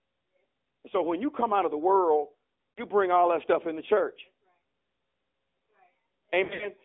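Throughout, the speech has passed through the AMR narrowband mobile codec, which rebuilds the voice from a vocal tract model and a few pulses per frame. The line band runs only from 250 Hz to 3.5 kHz, and the coding damage is plainly audible as a buzzy, synthetic edge that fits a mid rate of around 10 kbps.

From 0.9 to 4.19 s the automatic gain is rising. The gain control judged the input too quiet and lifted its gain steadily by about 6 dB, so the voice and any background swell together over those three seconds rather than jumping.

At 2.74 to 2.83 s there are lost AMR speech frames. Frames failed their checks, and the decoder filled about 40 ms by repeating its last good pitch and vocal tract settings at falling gain, which sounds like a brief dip with a warbly, smeared texture.

From 6.44 to 6.69 s, lost AMR speech frames return more heavily. About 120 ms of frames drop out, scattered over 160 ms, with the longest unbroken run at 60 ms. 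The concealment draws the sound out and fades it, and the voice comes back weak and rough between the gaps.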